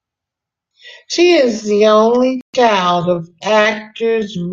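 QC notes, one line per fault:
1.21 s to the end: time-stretched section. At this point the speech abruptly slows to 0.61 times its pace, but the pitch does not drop. Software likely stretched this part to fill a set length. It held the pitch by repeating short slices of audio.
2.41 to 2.55 s: Bluetooth stall. The sound cuts to silence for 128 ms and then carries on. The gap is a hard dropout, not a fade. The likely cause is interference on the wireless link delaying packets. The headphones' buffer ran empty before they arrived. Playback had nothing to play and paused until the resent packets came in, which leaves this sudden hole in the sound.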